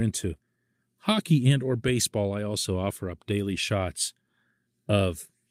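No technical fault can be heard anywhere in this speech recording. There is nothing to list in time order.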